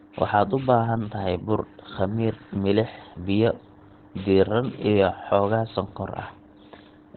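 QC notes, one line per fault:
throughout: Opus compression, likely in its SILK speech mode. The speech is muffled and hoarse, with nothing above 4.3 kHz, a heavy narrowband sound that fits a rate near 12 kbps. It lacks MP3's swirling holes and a plain filter's clean dullness.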